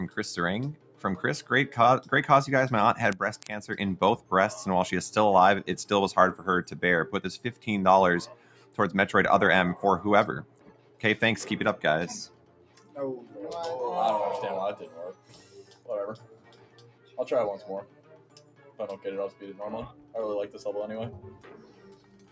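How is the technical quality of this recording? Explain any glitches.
The quality is compromised by a speech-oriented noise suppressor that keeps fighting the material. The audio passes through call microphone processing, so nothing sounds above 8 kHz.

Noise suppressor applied to music or sounds: Throughout the clip, a suppressor built for speech treats sustained tones, ambience and reverb as noise and pulls them down, with the gain swinging by about 10 dB. Attacks come through while held material sinks, so the sound pumps and thins. On a waveform the envelope keeps dipping after each onset. A spectrogram shows sustained bands and decay tails fading early and blotchily.

Sound cut by the noise suppressor: These deeper cuts fall at 0.73–2.12 s, 4.17–4.32 s, 8.29–8.79 s, 10.43–11.03 s, 12.27–13.37 s, 14.81–17.18 s, 17.83–20.14 s and 21.23 s to the end. Each drops the sound by about 10 to 11 dB. 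The longest, from 14.81 s, keeps pulling the sound down for around two seconds in total. Here the suppressor judged steady or decaying sound to be noise, so levels sag and tails are chopped short. The waveform shows sudden hollows, and the spectrogram shows darkened patches across sustained energy.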